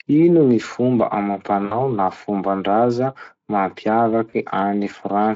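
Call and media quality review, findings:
VoIP packet loss concealed by the speech codec, 1.65–1.77 s and 4.29–4.34 s. Roughly 60 ms then 40 ms missing. Decoder extrapolates last pitch and filter, so buzzy tone or coloured noise that fades. Light Speex coding throughout.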